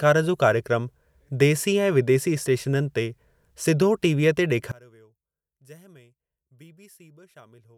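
From 4.72 s to the end, the speech collapses by about 28 dB, leaving a faint residue where the centred voice was. The likely cause is one channel inverted: with reversed polarity on one side, the shared signal cancels when the channels are summed to mono.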